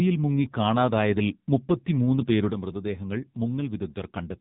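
The whole recording has gone through the AMR narrowband mobile codec at a low rate. The speech is rebuilt from a compact vocal-tract model excited by a handful of pulses per subframe, and nothing above about 3.8 kHz survives. The damage is heavy, which fits a mode near 6.7 kbps. The voice sounds muffled and telephone-thin, with a buzzy, synthetic edge on voiced sounds from start to finish.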